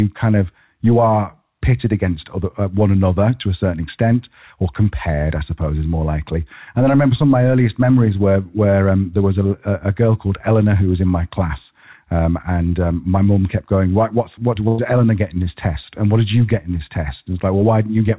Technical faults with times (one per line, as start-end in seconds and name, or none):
14.68-14.80 burst of packet loss